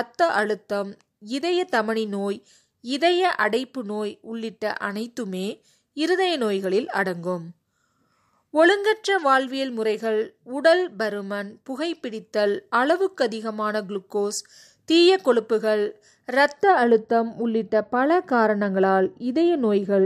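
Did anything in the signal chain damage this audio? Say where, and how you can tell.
Yes. From 16.63 s to the end at 20.06 s the speech turns dull and muffled. This de-emphasis applied wrongly is a shelving treble cut, meant to undo pre-emphasis, either acting on audio that had none or applied twice, most plausibly a playback or decode stage. The highs fall away gradually, ending about 11 dB down at 10 kHz relative to 1 kHz. A codec's band limit or a low-pass filter would instead cut off sharply, leaving the upper treble missing rather than gently sloped.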